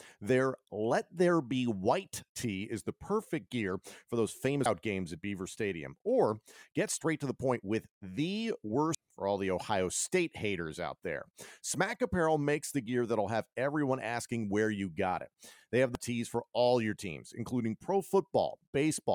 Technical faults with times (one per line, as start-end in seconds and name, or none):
4.65 damaged data in a compressed stream
8.94 damaged data in a compressed stream
15.95-15.98 damaged data in a compressed stream